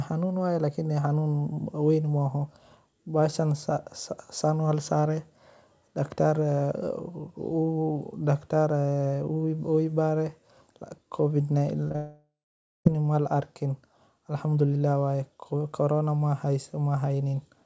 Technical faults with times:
11.88-11.96 short concealed packet loss
11.96-12.87 long network dropout

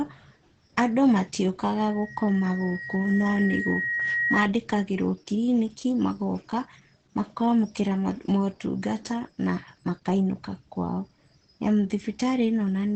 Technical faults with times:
0.00-12.95 Opus compression
1.77-4.51 loudspeaker feedback squeal

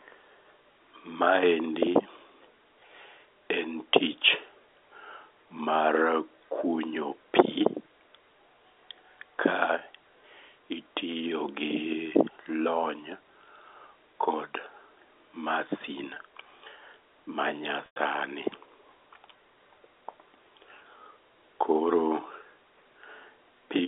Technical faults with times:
16.14-16.16 packet loss with pitch repetition
17.86-17.96 packet loss with pitch repetition

